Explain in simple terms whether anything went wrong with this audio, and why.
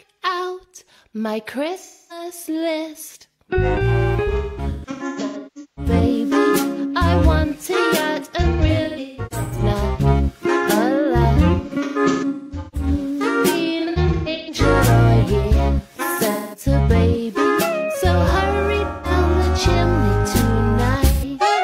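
AAC frame loss with concealment smears the sound into brief noisy, phasey patches around 1.78–2.25, 4.27–5.92, 8.42–9.63, 11.53–12.87, 13.79–14.54, 16.31–16.63, 18.87–19.11 and 21.13–21.24 s. The decoder filled the gaps from the last good audio, so they aren't silent dropouts.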